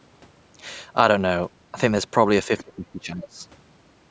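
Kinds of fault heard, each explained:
Speech suppressed in double talk: from 2.48 to 3.42 s the speech dips and breaks up, around 20 dB down at worst, likely an echo canceller muting overlapping talk.
Other side's voice leaking through: a faint scrap of a second voice at 3.22 to 3.27 s, about 20 dB below the speech, likely loudspeaker echo left unremoved.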